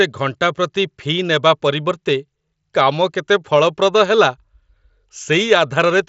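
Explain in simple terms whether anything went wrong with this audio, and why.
Nothing went wrong: the speech travels over an ordinary Bluetooth headset link using the mSBC codec, which keeps sound only up to about 7.7 kHz and adds a slight graininess, and that is simply how such a connection is built to work.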